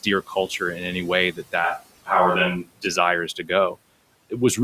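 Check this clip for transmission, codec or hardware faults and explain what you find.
One fault stands out, a switch to a distant microphone, from 1.64 s to 2.86 s. The close microphone's signal likely dropped out, leaving the speech picked up by a microphone further away. The speech turns abruptly roomy and hollow, with thinner bass, then snaps back just as suddenly at 2.86 s. The level barely changes, and the background noise heard through that path sits roughly 30 dB under the speech, well below the steady room noise, which sits about 21 dB below.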